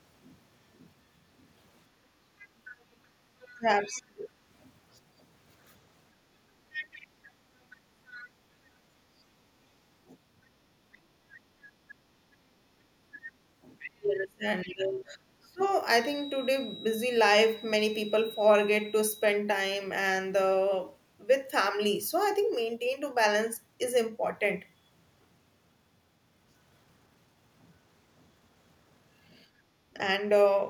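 From 1.89 to 3.07 s the room sound behind the speech dips. For about a fifth of a second in total it falls by about 15 dB, then comes back. This is background gated by the echo canceller. The loudspeaker was playing, and the canceller pulled the microphone down hard to keep that playback out. The same thing happens briefly from 29.5 to 29.66 s. There the room sound drops by about 8 dB for roughly 150 ms.

From 2.39 to 4.01 s a second, faint voice sits under the speech. It is far quieter than the talker, around 25 dB down. It returns louder, around 15 dB below the speech, from 6.72 to 8.26 s and from 13.15 to 15.66 s. This is the other side's voice leaking through. The likely cause is the far end's voice playing on the device's loudspeaker and reaching the microphone. The canceller did not fully remove it.

From 3.54 to 4.33 s the talker's speech sinks. Across roughly 0.7 s it drops by as much as 30 dB. 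It happens again from 13.19 to 15.65 s, with roughly 1.5 s affected and dips near 25 dB. A tiny dip of about 5 dB follows at 29.94 to 29.99 s. This is speech suppressed in double talk. Both sides were likely talking at once, and the canceller turned everything down.

From 15.92 to 19.41 s a thin, steady whistle at 3.9 kHz rides behind the speech. It sits around 20 dB below the speech and swells and fades slowly in level. This is a feedback whistle. The loudspeaker-to-microphone loop was likely sitting just at the edge of feedback. One high frequency kept ringing without running away into a howl.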